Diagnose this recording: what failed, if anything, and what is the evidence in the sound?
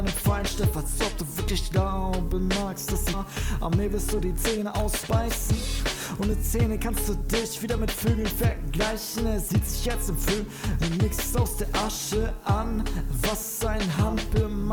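The fault sits in the network and jitter-buffer stage. At 3.13 s the audio makes a skip ahead: roughly a second of material is missing, and the two sides are butted together with no fill, so the sound lurches forward abruptly instead of pausing. The receiver discarded a block of late or overflowing audio while newer audio was already queued, which cut playout delay by about a second in a single step.

Immediately afterwards, from 3.24 to 4.74 s, the jitter buffer speed-up is audible. Playback runs about 9% fast while pitch stays unchanged, and the sound feels hurried, with roughly 150 ms trimmed away. A milder pass follows from 7.09 to 8.72 s at about 2% fast, removing around 40 ms. In both passes the buffer was holding more than its target depth and shed it by cutting out short pitch-period-length slices in succession.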